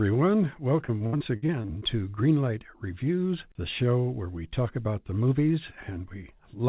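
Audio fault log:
0.86–1.83 s, repeated packet loss (robotic sound): the speech turns choppy, with a run of short holes up to 66 ms. Each is patched by stretching the previous sound, covering about 30% of the stretch, over call audio with nothing above 4 kHz.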